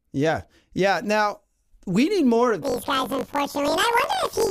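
From 2.62 s to the end of the clip, the speech shows planar audio read as interleaved. Each block stores all its left-channel samples followed by all its right-channel samples, but playback treats them as alternating left-right pairs. As a result, each block is heard twice at double speed, once from the left half and once from the right, and the overall pace is unchanged. The block length of about 21.3 ms fits a 1024-sample block. The speech sounds an octave high, with a rough flutter at about 47 Hz, the rate at which the blocks repeat.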